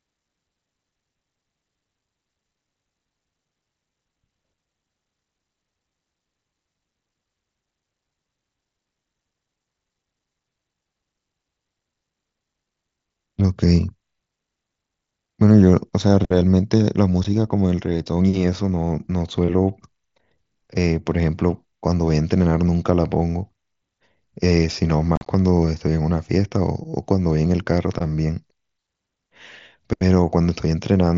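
Headset-to-phone voice packets were lost and left unconcealed on the mSBC link, so silence or an idle pattern filled each gap. At 17.24 s a single 7.5 ms hole cuts in abruptly. From 25.16 to 25.27 s, 67.5 ms drops out in scattered pieces, longest 37.5 ms, sounding chopped and crackly.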